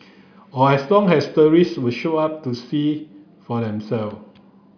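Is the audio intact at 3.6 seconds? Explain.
Yes, at 3.6 seconds the speech plays through cleanly with no audible dropout, click, distortion or other technical fault.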